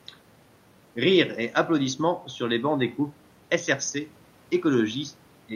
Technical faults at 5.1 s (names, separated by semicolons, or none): none